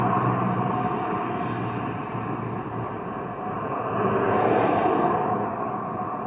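No technical faults can be heard anywhere in this recording of sounds.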